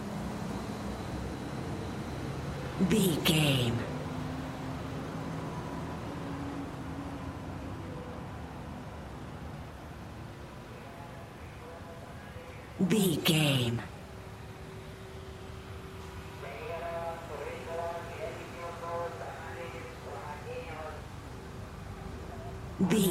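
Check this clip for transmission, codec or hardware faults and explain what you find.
Nothing in the transmission, codec or hardware chain shows up as a fault anywhere in this clip.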